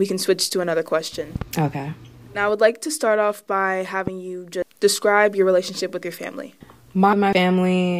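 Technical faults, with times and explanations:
1.36–1.44 s and 4.07 s, loud pop: a double pop after "switch to another question", then a single, harder thump after "to start off by", about 5 dB and 10 dB above the speech. These are likely electrical pulses from a switch or static. Each shows as a spike on the waveform and a full-height vertical stripe on the spectrogram.
4.62 s and 7.13 s, compressed frames skipped: about 0.7 s of speech vanishes at each point, the first just before "describe your relationship with". Whole blocks of frames about 93 ms long were never played, so the speech jumps ahead. Both show as abrupt spectrogram discontinuities.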